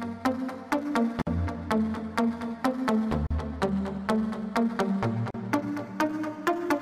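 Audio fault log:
1.22–1.27 s, 3.27–3.31 s, 5.31–5.34 s: gap at a join of encoded pieces. Silences of 50, 38 and 38 ms, their edges smeared by the codec, recur every 2 s, then the sound resumes where it stopped. Separately encoded pieces were joined with their leading encoder delay and final-frame padding left untrimmed.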